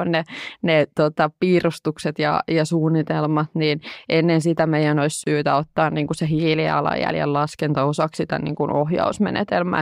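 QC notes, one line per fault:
5.24–5.26 s, gap at a join of encoded pieces: a 27 ms gap cuts into the speech between "ennen sitä meidän olisi" and "ottaa niin kuin se", with smeared edges. Separately encoded segments were joined untrimmed, leaving encoder delay and end padding at the seam.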